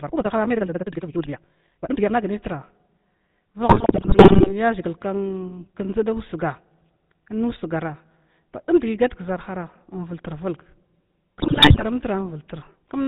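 Right from the start, up to 2.18 s, the speech runs at almost double pace, about 1.9 times normal, yet the pitch doesn't rise with it. That's a time-stretched section, likely software squeezing the audio to fit a shorter slot by dropping small chunks while holding the pitch. It comes across rushed, and then the pace snaps back to normal.

Underneath the whole clip is the GSM full-rate codec sound, and it's plainly audible. The character fits the old 13 kbps GSM full-rate coder, which models the voice with a filter and drives it from a coarse pulse excitation. Nothing above 4 kHz survives, so everything sounds narrow and telephone-band, and the voice has that gravelly buzz the codec is known for.

Then come two bursts of GSM bit errors. The first runs from 3.68 to 4.54 s and the second from 11.38 to 11.84 s. In both, the speech breaks into squawks, pops and gargly distortion, frame after frame. 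That's corrupted bits getting into the decoder's filter, pitch and gain values, which bends the spectrum and spikes the level. The density of the damage points to a bit error rate of around 6 percent in each burst. The earlier one is longer.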